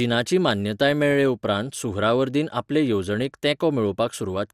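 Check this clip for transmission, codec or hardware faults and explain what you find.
MP2 compression runs throughout the speech, from start to finish. The likely cause is MPEG Layer II coding at a low rate, which fits about 80 kbps. Starved of bits, the upper sub-bands drop in and out and the rest are coarsely quantised, leaving the speech dull, gurgling and grainy.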